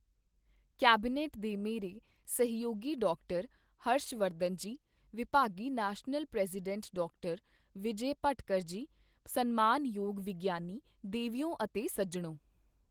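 This speech clip has nothing technically wrong with it.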